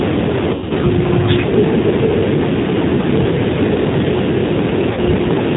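G.729 codec coding runs through the whole speech clip, and the damage is plainly audible: everything above 4 kHz is gone, and the voice sounds rough and synthetic, rebuilt from a vocal tract filter, a pitch predictor and sparse pulses, which fits 8 kbit/s G.729A. VoIP packet loss concealed by the speech codec hits at 0.54–0.72 s, where about 140 ms of audio is missing, scattered across 160 ms with an 80 ms run at its worst. The decoder stretches its last pitch and filter into a fading buzzy tone or coloured noise, and the voice stays weak briefly after. A second concealed gap at 4.93–5.00 s covers 40 ms, pointing to two lost packets, and produces the same short stretched, fading smear.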